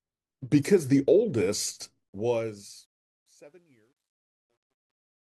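From 2.09 s the speech fades out to 5.22 s. The fade shows truncation distortion. The gain stage keeps only about 11 bits, without dither. Low levels collapse into coarse steps. From 3.26 s to the end, the tail turns gritty.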